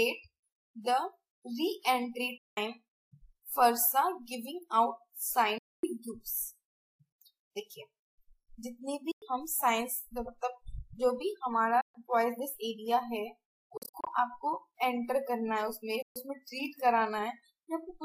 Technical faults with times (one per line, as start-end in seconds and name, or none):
2.38-2.57 Bluetooth dropout
5.58-5.84 Bluetooth dropout
9.11-9.22 Bluetooth dropout
11.81-11.95 Bluetooth dropout
13.77-14.07 Bluetooth dropout
16.02-16.16 Bluetooth dropout